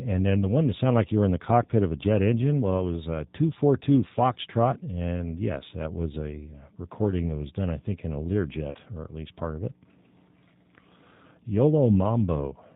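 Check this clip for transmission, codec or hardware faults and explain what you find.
Two faults are present: low-bitrate speech coding throughout, and one concealed packet-loss gap.

Throughout, the G.729 codec is plainly audible. The speech is rebuilt from a vocal-tract filter, pitch predictor and sparse pulses, which fits 8 kbit/s coding. Everything above 4 kHz is missing, and voicing is rough and slightly synthetic. A plain 4 kHz low-pass would not add this buzzy, pulse-built texture.

From 8.71 to 8.78 s, between "I think in a" and "or at least part", VoIP packet loss concealed by the speech codec leaves about 40 ms gone, which fits four lost frames. The decoder extends its last pitch and filter into a fading buzzy tone or coloured noise. Unlike a hard dropout, this fills the gap rather than leaving silence.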